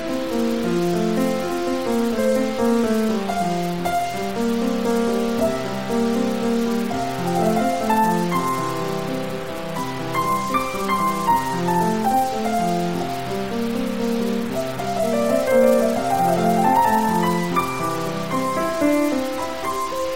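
A stuck bit runs through the whole music clip, heard as distortion riding on everything, with hiss filling the quieter moments. The likely cause is one data bit held at a fixed value, offsetting about half the samples by that bit's weight.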